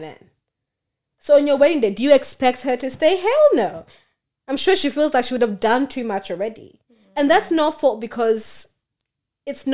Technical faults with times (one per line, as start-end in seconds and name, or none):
none